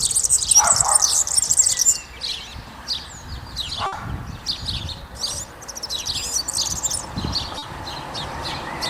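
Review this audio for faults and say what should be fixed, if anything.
A burst of packet loss from 3.86 to 3.93 s dropped 60 ms of audio. The receiver extended and faded the last sound across the gap, giving a held buzz or fading hiss before playback resumes further on.

Short concealed packet loss at 5.07 to 5.10 s (20 ms) and 7.58 to 7.63 s (40 ms) let the decoder bridge each hole from the preceding sound, heard as a brief smear or wobble.

To prevent these, stabilise the network path and size the jitter buffer so late packets still arrive in time, adding forward error correction or redundancy to recover lost ones.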